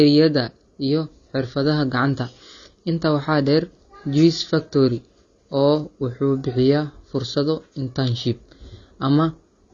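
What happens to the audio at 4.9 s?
At 4.9 s the speech sounds dull and smeared, with a warbling, fizzy texture on sustained sounds and sibilants, and nothing above 6.9 kHz. This damage runs through the whole clip rather than starting there. The likely cause is AAC compression at a low bitrate, consistent with AAC-LC at around 24 kbps. The coder quantises each frame's frequency lines so coarsely that it drops the top of the spectrum and leaves gaps in the remaining bands or fills them with substitute noise.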